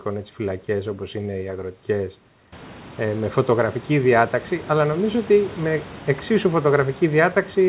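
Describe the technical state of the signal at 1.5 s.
At 1.5 s the signal is intact, with nothing wrong beyond the normal narrowband character of the call path, which carries nothing above 4 kHz.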